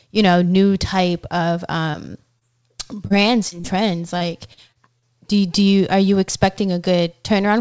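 Brief smears interrupt the speech at 1.91, 2.39, 3.07, 3.49 and 3.60 s. Each is short concealed packet loss. About 30 ms of the call arrived too late for the decoder, and the receiver covered the hole with roughly 22 to 33 ms of synthesized continuation. That continuation follows the preceding pitch or, if the sound was unvoiced, uses shaped noise, and then crossfades back into the real signal. The last two events sit close together.

From 4.18 to 5.05 s the speech turns choppy, with fragments missing. This is repeated packet loss. Within that stretch, holes of up to about 36 ms keep recurring before the concealment can settle, so roughly 14 percent of the span is patched rather than real. The patches follow one another closely enough to produce a choppy texture. Throughout the clip the band stops at 8 kHz, which fits a wideband call codec.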